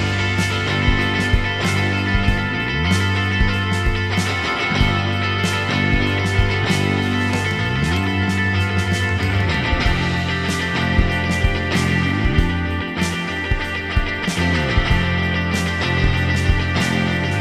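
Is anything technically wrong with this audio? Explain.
No, nothing is technically wrong with this audio.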